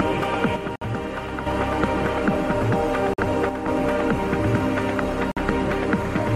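From 0.56 to 1.46 s the level falls abruptly by about 6 dB and then returns, with the tone unchanged, which points to one channel dropping out, likely one of two identical channels lost before the mono sum. At 3.49 to 3.68 s the same drop recurs. Unlike a gap, the sound never stops.

Inside the first drop, at 0.76 s, a gap at a join of encoded pieces opens for 59 ms, and two more follow at 3.14 s (48 ms) and 5.32 s (50 ms). Here, separately encoded pieces were joined with their start-up delay and end padding left in, so the silence sits between pieces. The sound then resumes exactly where it stopped, with nothing skipped.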